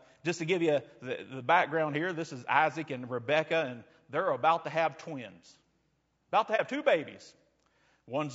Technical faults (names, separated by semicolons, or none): low-delay AAC compression; AAC frame loss with muting